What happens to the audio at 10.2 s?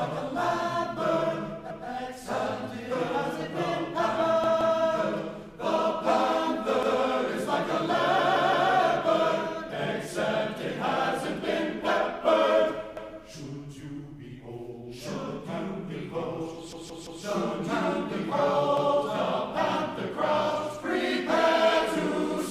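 Nothing goes wrong at 10.2 s; the audio plays through that moment intact, with no dropout, click, glitch or other fault.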